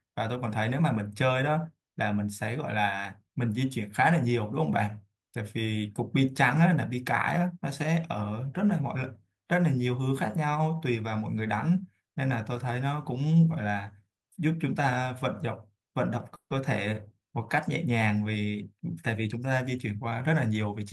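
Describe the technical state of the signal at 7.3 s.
At 7.3 s the signal is intact, with no audible fault at that point in the speech.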